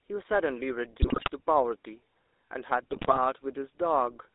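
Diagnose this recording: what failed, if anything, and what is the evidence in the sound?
The codec stage is at fault for the whole clip. The speech carries the buzzy, gravelly roughness of the GSM full-rate codec, plainly audible from start to finish. The band runs only from about 300 Hz to 3.7 kHz. This coder models the vocal tract and excites it with a sparse, regularly spaced pulse train instead of the real waveform. That coarse excitation produces the grit. The character fits a 13 kbps full-rate stream.

The network stage adds GSM bit errors in two bursts, at 1.02 to 1.30 s and 2.91 to 3.19 s. Each lasts about 0.28 s. The voice breaks into squawks, pops and gargling. The first burst carries the higher bit error rate, about 6.0 % against 3.4 % in the second. Corrupted bits on a weak radio link reached the decoder. Damaged filter, pitch and gain parameters warped the spectrum and threw the level around, frame by frame.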